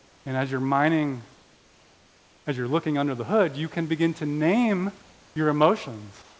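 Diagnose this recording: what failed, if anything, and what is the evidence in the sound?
Comfort noise in place of the background shows up in three pauses: from the start to 0.26 s, before "and as you're mining"; from 1.34 to 2.46 s, between "and as you're mining" and "as you're looking under"; and from 6.22 s to the end. The real room noise drops out and a flat, featureless hiss takes over, about 1 to 3 dB quieter. That's likely call processing: discontinuous transmission stops sending in silences and the receiver synthesises a rough noise match.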